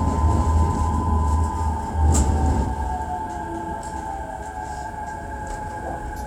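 Nothing stood out as a technical problem on listening to this recording of sounds.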